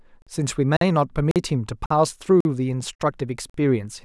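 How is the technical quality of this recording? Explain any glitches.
The speech is chopped up by a regular gap between chunks. Seven times, at 0.22, 0.77, 1.31, 1.86, 2.40, 2.95 and 3.50 s, it drops to silence for 46 ms and then picks up where it left off. The audio seems to arrive in half-second chunks with a little dead air inserted at each join, maybe from padding or a late-starting player. Nothing goes missing, but you hear short holes ticking along at a steady rate.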